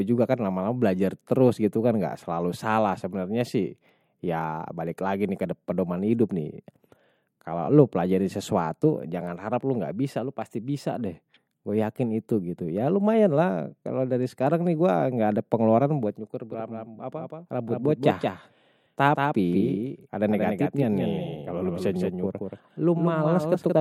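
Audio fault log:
16.52 s to end: doubled audio track. The speech is likely being captured twice, once through a slower path, so a full-band copy about a fifth of a second late and roughly 5 dB quieter runs beneath it, cutting in abruptly with no decay or room colour.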